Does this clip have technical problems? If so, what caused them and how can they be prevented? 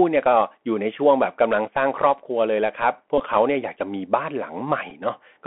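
Yes. Throughout the speech there is the sound of the Bluetooth CVSD headset codec. The audio is confined to a narrow telephone band of about 200 Hz to 3.4 kHz, so it sounds thin and boxed-in. CVSD codes each sample as a single up-or-down step whose size adapts. Loud high-frequency energy outruns that step and distorts, sibilants come out scratchy, and a granular hiss sits under the speech. The damage is plainly audible and fits a 64 kbps CVSD link. To prevent it, record through a wideband path such as mSBC or LC3 wideband speech, or use a wired or dedicated microphone instead of the headset's hands-free profile.

The second fault is Bluetooth headset packet repeated, at 3.18 to 3.22 s and again at 4.90 s. When voice packets between headset and phone are lost, the chip decodes the previous packet's bits again instead of producing silence. At 3.18 s about 15 ms of audio is replaced by these repeats, which fits roughly four lost packets. 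Each repeat cycles every 3.75 ms, giving a short buzzy stutter near 267 Hz. At 4.90 s about 7.5 ms goes missing, likely two packets. To prevent it, keep the headset close to the phone with a clear line of sight and away from Wi-Fi and other 2.4 GHz interference.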